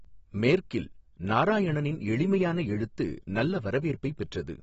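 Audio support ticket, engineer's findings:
Dull, smeared speech throughout, nothing above 7.7 kHz. Likely AAC compression (AAC-LC), bitrate starved, fits about 28 kbps: coarse quantisation leaves spectral holes and swirly artefacts. A plain low-pass filter would only lose top end, without this texture.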